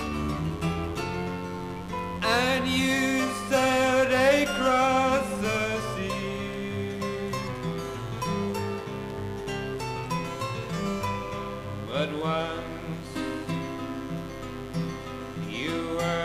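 From the very start and running the whole way through, there's a mains buzz sitting well up in the mix, only about 15 dB below the sound itself. It's built on 50 Hz, but it isn't a smooth hum. Something like a dimmer, a rectifier or a poorly shielded cable is letting sharp switching spikes in on every half-cycle, so the harmonics climb into the kilohertz range. That's why it comes across as a constant, gritty rasp.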